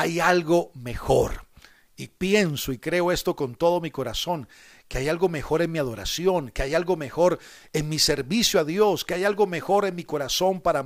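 No technical faults are audible.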